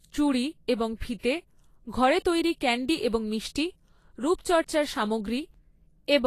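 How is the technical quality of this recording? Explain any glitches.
The recording carries plainly audible codec damage throughout the speech. From start to finish, the treble sounds grainy, with nothing above 14.2 kHz. This is likely Vorbis compression at a low rate, near 34 kbps, replacing fine treble detail with noise. A spectrogram shows a hard ceiling with speckled upper bands.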